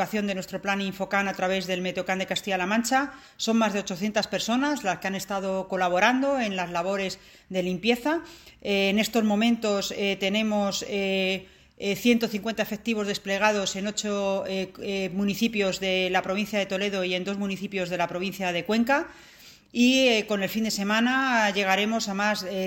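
No technical faults can be heard anywhere in the recording, and the signal holds steady throughout.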